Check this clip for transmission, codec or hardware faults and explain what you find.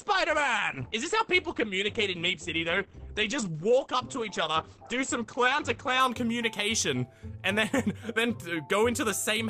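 One fault: an adaptive stream starting at a low bitrate. From 0.0 s to 6.0 s the player holds a cheap version of the stream so playback begins quickly, then switches up once it has gauged the connection. Until the switch the treble is thin or synthetic-sounding and coding artefacts are prominent, which fits roughly 16 kbit/s Opus. At 6.0 s the sound becomes fuller and clearer at once, with no gap, consistent with a step to about 64 kbit/s.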